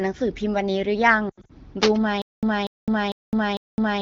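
Lost AMR speech frames hit from 1.29 to 1.51 s. Radio errors corrupted the coded speech, and the wideband decoder stretched its last good settings with falling gain. About 140 ms is lost in patches over 200 ms, the longest run 80 ms, so the speech warbles, thins and briefly drops out.

Cable scratch noise follows from 1.82 to 1.97 s: a dense, uneven burst of rustling scratches about as loud as the speech itself. It likely comes from a worn cable, connector or control being moved, its contact resistance jumping rapidly and injecting noise.

Stutter with silent gaps runs from 2.22 s to the end. The same 240 ms fragment plays four times, each followed by about 211 ms of digital silence, a steady 451 ms cycle. A stalled player or stream likely replayed its last buffer at each retry, losing the audio between.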